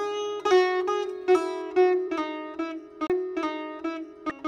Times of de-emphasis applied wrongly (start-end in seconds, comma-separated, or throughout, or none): 1.62-4.48